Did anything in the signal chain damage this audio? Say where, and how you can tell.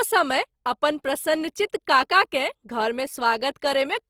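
Yes. Throughout the clip the speech sounds rough and grainy, with a noisy, hissy texture where clean harmonic detail should be, yet the top end stays open, reaching about 20.2 kHz. That pattern points to the codec stage, likely Opus compression in its music (CELT) mode at a low rate, consistent with about 24 kbps: bands short of bits are filled with folded or synthetic noise, so sibilance and vowels turn grainy rather than swirly or muffled.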